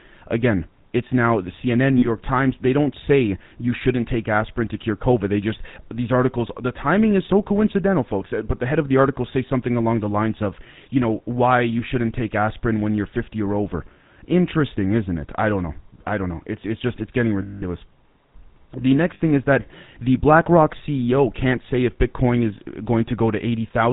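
Throughout, the speech has a buzzy, gravelly roughness and nothing above 4 kHz, the plainly audible mark of the GSM full-rate codec, consistent with 13 kbit/s.

Lost GSM frames at 1.98 s (40 ms), 17.42 s (200 ms) and 19.14 s (60 ms) produce a rough metallic ring, as the last good frame repeats.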